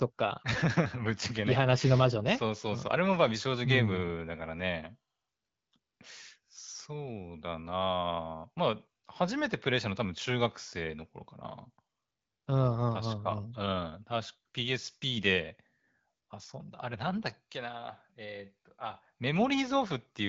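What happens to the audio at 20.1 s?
Nothing goes wrong at 20.1 s; the speech carries straight through that moment with no dropout, click or other fault, still bearing the light coloration of the AMR wideband (HD Voice) codec running at 12.65 kbit/s.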